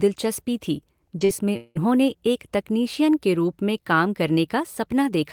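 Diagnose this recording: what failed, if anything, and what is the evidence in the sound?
Two quick blips at 1.19 to 1.23 s and 1.25 to 1.31 s sound like brief smears in the speech. That's short concealed packet loss on the network side: about 20 ms and then 40 ms of audio arrived too late for the decoder, which filled each gap by extending the last sound and blending back into the real signal.

From about 1.57 to 1.77 s the speech gives way to a continued buzz that fades out over roughly 184 ms. It ends in a very brief silence before the audio comes back, without the part that was lost. That's likely a long network dropout: nothing arrived for that stretch, so concealment kept the last sound going until it ran out.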